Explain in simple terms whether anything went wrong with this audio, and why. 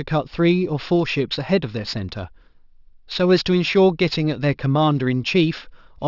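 Throughout the recording, the speech has a gritty, metallic edge, most noticeable on hissy sounds like s and sh, and the top of the sound seems to press right up against a ceiling around 6 kHz. That fault is aliasing: the audio was converted to a lower sample rate, which fits a drop to 12 kHz, without first removing the highest sounds. Anything above 6 kHz folded back down as false, unrelated tones.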